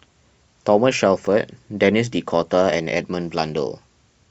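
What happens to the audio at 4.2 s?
Nothing goes wrong at 4.2 s; the speech carries on intact at that point with no dropout, glitch or distortion.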